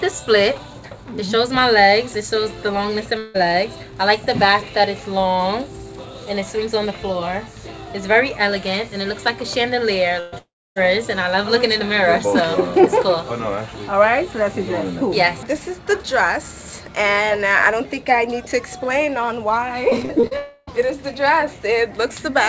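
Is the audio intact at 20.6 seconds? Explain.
No. At 20.6 seconds the clip is inside a gap that runs from about 20.37 to 20.69 s. This is most likely a long network dropout. For about 0.3 s no new audio arrived, and that stretch of sound is gone. The receiver covered the hole by stretching the last sound it had into a fading, buzzy hiss. The fill lasts the whole gap and never drops to silence. The audio then resumes without the lost part. As elsewhere in the clip, nothing sits above 8 kHz, which fits the G.722 codec on this call path.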